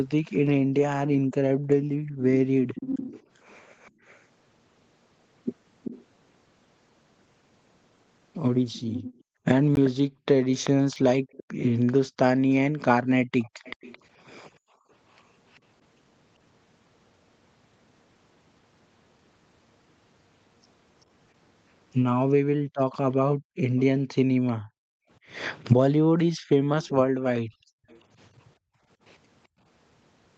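Speech carried over a call, with nothing above 8 kHz. An echo leak runs from 0.27 to 15.6 s, again from 21.01 to 24.52 s, and briefly from 27.89 to 28.01 s. A faint second copy of the voice trails the original by 387 ms. It sits roughly 15 dB down at first, nearer 20 dB down later, and about 30 dB down in the last scrap. The likely cause is a far end on loudspeaker whose echo canceller let some of its microphone pickup return. The background is also gated by the echo canceller. Between 0.63 and 2.23 s, between 9.21 and 14.91 s, and between 22.6 and 29.59 s, the room sound dips sharply and comes back. The deepest drops reach about 40 dB. They add up to roughly 0.7 s, 1 s and 2 s in those spans. This is the canceller clamping the microphone while the loudspeaker plays, then releasing it. Two blocks of digital silence also occur. One lasts 16 ms at 9.76 s, and the other lasts 3 ms at 10.96 s. 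The signal cuts out and back with no fade. The first is heard as a short hole and the second as a tick. Output buffers that were not filled in time would explain this.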